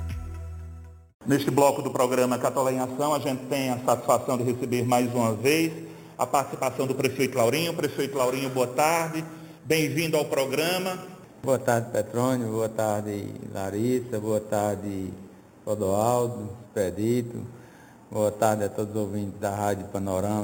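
Throughout, imaging from sample-and-hold upsampling: unsmoothed repeated samples leave a metallic fizz, shown on a spectrogram as a mirrored 4–8 kHz band about 16 dB down.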